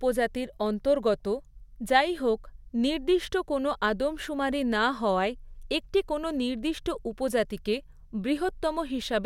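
No technical faults are audible.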